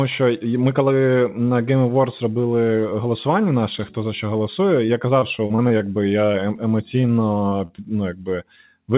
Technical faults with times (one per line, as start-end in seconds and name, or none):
4.86-5.82 repeated packet loss (robotic sound)
6.26-6.59 short concealed packet loss
7.01-7.05 short concealed packet loss
7.49-7.80 short concealed packet loss